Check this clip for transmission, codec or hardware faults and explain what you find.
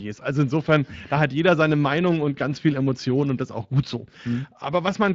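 The clip carries one fault, Speex codec damage, present throughout. The CELP coder models the speech with a vocal-tract filter and a coarsely coded excitation, which fits a setting near 20 kbps. Too few excitation bits make the speech plainly hoarse and grainy.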